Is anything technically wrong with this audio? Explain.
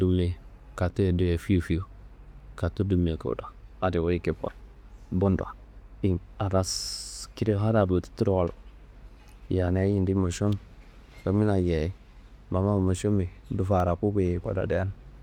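Yes. At 10.52 s and again at 13.80 s, an electrical switching spike breaks into the speech, likely from a nearby switch, motor or static discharge arcing briefly and coupling into the audio line. Each is a sharp snap over the sound, peaking around -25 and -20 dBFS.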